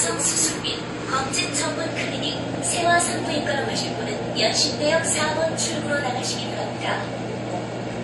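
Everyday sounds, smeared throughout by two codecs' artefacts layered together with nothing above 11.3 kHz, likely transcoding between lossy codecs: low-rate MP3, then AAC-LC.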